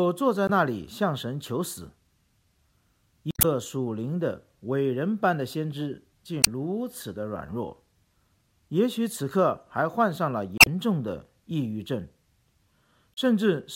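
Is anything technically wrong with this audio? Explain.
Yes. Damaged data in a compressed stream appears five times: 0.47–0.50 s, 3.31–3.45 s, 6.41–6.48 s, 10.56–10.68 s and 13.14–13.18 s. Corrupted bytes make the decoder misread frames and lose sync until it finds the next valid frame header, which produces short chirps, squawks or blips.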